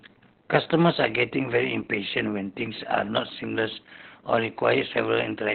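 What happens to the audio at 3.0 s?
At 3.0 s, as throughout, Opus voice compression cuts off above 4.2 kHz, leaving a flat spectrogram ceiling. Its coarse low-bitrate coding makes the speech muffled, hoarse and robotic.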